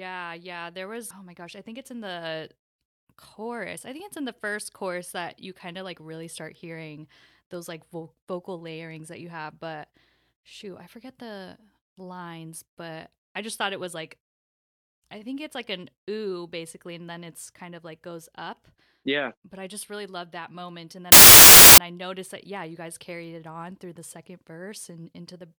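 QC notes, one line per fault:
21.12–21.78 s, file tags played as audio: an embedded cover picture, stored as compressed data, was decoded as if it were samples, so the speech cuts to a 0.66 s burst of very loud white noise with abrupt edges, ending just before "I noticed that yeah".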